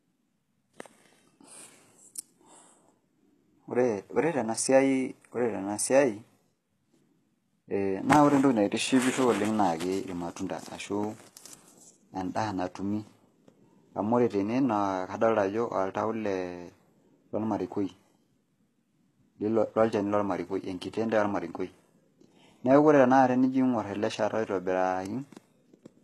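From start to finish the speech has gritty, lispy s sounds and a treble that's off, with nothing above 12.3 kHz. That's likely HE-AAC compression at a low bitrate, around 16 kbps, rebuilding the top end from copied lower bands.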